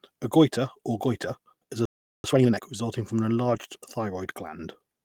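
A speech clip with three faults. After "or goiter is a", the sound halts from 1.85 to 2.24 s, about 0.39 s of silence, then resumes, which marks a playback stall, likely the player starving for data. A time-compressed catch-up follows from 2.24 to 2.62 s, leading into "resulting from an", with the audio hurried to roughly twice normal speed. Unlike a speed-up or pitch shift, the pitch stays normal. Just after "resulting from an", from 3.55 to 3.57 s, there is a lost packet rebuilt from error correction. This 20 ms stretch sounds rougher and noisier, but it has no gap or click, which sets it apart from a dropout and fits a single lost packet.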